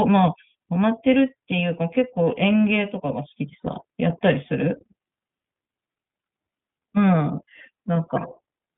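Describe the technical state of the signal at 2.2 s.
At 2.2 s the speech carries iLBC codec damage, present throughout the clip. Each short frame is coded independently, making it plainly rough and synthetic, consistent with iLBC's 20 ms, 15.2 kbps mode. A spectrogram shows energy confined between 150 Hz and 3.5 kHz, with a hard ceiling.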